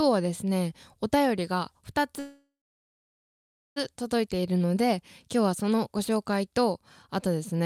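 At 2.19 s the speech stops and the last sound is stretched into a brief fading buzz, then about 1.25 s of silence, until it picks up again at 3.78 s. This is a call audio freeze, likely from packets arriving late so the jitter buffer ran dry. Unlike a packet-loss dropout, nothing is skipped: the speech resumes exactly where it halted, so the roughly 1.57 s pause is inserted and everything after it plays that much later.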